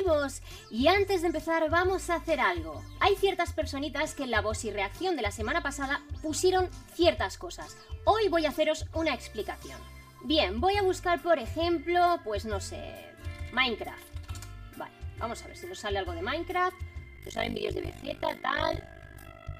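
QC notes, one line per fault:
throughout: channel delay (comb filtering), one channel lags by about 3 ms before the mono sum, carving fixed, evenly spaced notches from roughly 150 Hz upward; unlike flanging, the hollowness never sweeps.
10.96 s: dropped samples, a single sharp click with no audible gap, likely a handful of missing samples making the waveform jump; a dropout would silence sound instead.
17.16 to 19.59 s: overlap-add ripple, mismatched frame overlap swings the level by about 60 dB around 50 times a second, a rough flutter locked to a steady rate, unlike irregular crackle.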